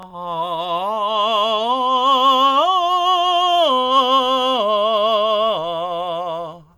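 Nothing goes wrong anywhere in this music, so there's no fault to point to at any moment.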